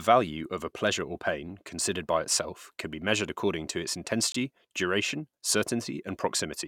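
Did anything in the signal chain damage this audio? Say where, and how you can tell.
Yes. A Bluetooth dropout cuts the speech from 4.32 to 4.36 s. The signal falls to silence, with either abrupt edges or a fade of a few milliseconds, and then resumes as if it had kept playing, skipping ahead rather than pausing. About 23 ms of audio is missing, which fits one lost frame. This most likely happened on the wireless playback link: a packet didn't reach the headphones in time, so nothing was output until the next good packet arrived.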